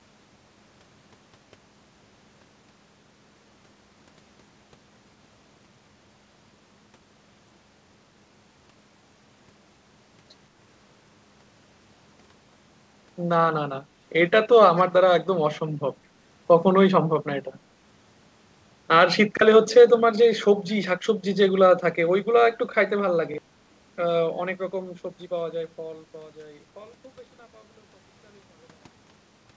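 A speech recording over a call path with two kinds of fault. An echo leak is the likely cause of a faint, delayed copy of the voice at 14.76 to 14.83 s, trailing by about 202 ms and sitting about 25 dB below the speech: a loudspeaker echo that the far end's canceller failed to remove fully. Twice, new audio arrived late and the device replayed its last block, a repeated buffer, at 19.37 s and again at 23.34 s. Each time a 43 ms piece sounds twice with a hard join, a brief stutter that fits a 2048-sample buffer, and roughly 40 ms of audio is lost. Nothing is heard above 8 kHz, consistent with a wideband call codec such as G.722.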